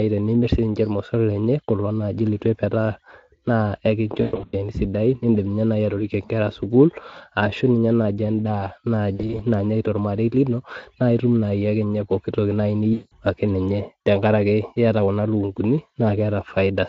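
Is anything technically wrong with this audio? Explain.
Yes, there is VoIP packet loss concealed by the speech codec at 4.21 to 4.69 s, 9.15 to 9.41 s and 12.93 to 13.17 s. Speech packets went missing, about 260 ms at the first with one 120 ms gap, 100 ms scattered across the second, and 180 ms at the third. Each time, the Speex decoder guessed the missing sound by carrying its last pitch and vocal-tract shape forward at falling level. The speech smears into a buzzy tone or coloured noise that fades, and stays thin and distorted briefly after the audio returns.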